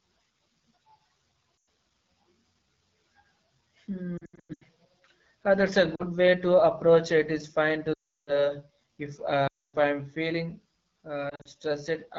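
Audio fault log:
throughout AMR wideband (HD Voice) codec: The speech is steadily rough and raspy, consistent with AMR-WB running at about 8.85 kbit/s, one of its lowest rates. Too few bits drive the pulse-and-vocal-tract model, and only shaped noise fills the top band. The grit is constant, not intermittent.
1.63 s, 4.17–4.65 s, 5.96–6.03 s (after "that's a"), 7.94–8.49 s, 9.47–9.76 s, 11.29–11.48 s lost AMR speech frames: The decoder replays the last good pitch and vocal tract settings with falling gain. Short losses give a dip or warble. Longer runs drop the sound to near silence within two frames. Unlike codec roughness, these are local dropouts.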